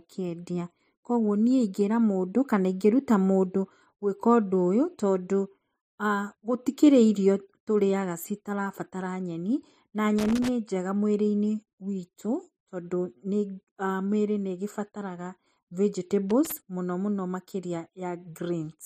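Speech, marked by two bursts of loose connector crackle. The first runs from 10.19 to 10.49 s. The second runs from 16.30 to 16.52 s. Each is an irregular burst of crackle and scratching. The cause is a worn or dirty contact somewhere in the chain. When it shifts, it connects and disconnects very quickly. That chops the signal into fragments, which the ear hears as this rough, broken texture.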